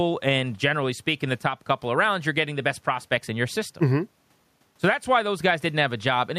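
Gain pumping runs through the whole speech recording. The level rises and falls with the talking. The room noise sits about 45 dB below the speech. The swing is around 5 dB. Loud and soft passages sit closer together than they should, and the sound feels squashed. The likely cause is a microphone gain set far too high, with a fast limiter pulling it down on every loud sound.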